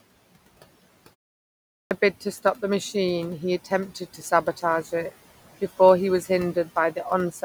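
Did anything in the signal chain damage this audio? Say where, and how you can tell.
Yes. At the playback stage, the output device went idle during a 0.69 s gap and had to wake up again. The clipped start after a pause runs from 1.76 s to 1.91 s: about 148 ms of onset is missing, and the phrase leading into "bid to stop the" bursts out of silence without its opening sounds. The device was still relocking when the signal resumed, so those first samples never reached the output.

In call processing, the noise suppressor misjudged part of the speech as noise between 3.95 s and 4.63 s, just before "it before he was". Its gain dipped by about 9 dB at the deepest point, pulling down quiet stretches totalling roughly a sixth of a second. That is speech cut by the noise suppressor: soft consonants and endings turn faint and swallowed. The room noise sits about 20 dB below the speech.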